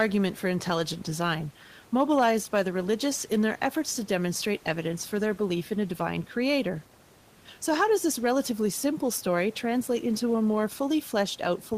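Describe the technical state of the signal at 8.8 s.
At 8.8 s the signal is intact, with the speech clear of any fault and only the room's own background noise sitting about 30 dB below it.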